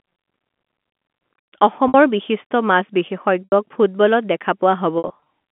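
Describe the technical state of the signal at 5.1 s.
At 5.1 s you're inside a stretch of packet loss with pitch repetition running from 4.98 to 5.20 s. About 140 ms went missing in short gaps, the longest 60 ms, which fits 20 ms packets. The decoder loops the last pitch period to patch each hole, so it sounds buzzy and briefly held over the narrowband G.711 line.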